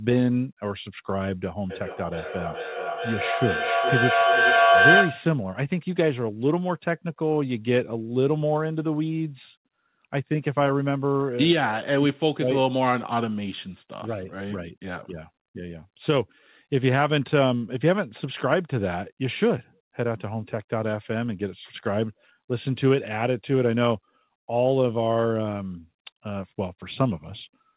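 From 1.7 to 5.36 s there's feedback echo between two devices: two endpoints in the same room are on the call, one plays out what the other's mic sent, and that mic grabs it again. Each device's echo canceller only handles its own playback, so nothing stops the loop. Every word comes back roughly every 400 ms, getting thinner and more ringing, and because the repeats peak about 5 dB above the speech they stack up rather than fade. All of it sits inside the narrowband call audio with nothing above 4 kHz, which fits a G.711 link.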